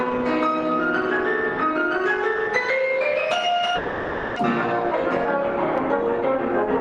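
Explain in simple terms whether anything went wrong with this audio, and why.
Something went wrong from 3.75 to 4.40 s. This is a long network dropout. The sound stalls into a fading buzz or hiss for about 0.63 s. It then resumes with about 0.4 s missing, likely because audio stopped arriving and arrived late.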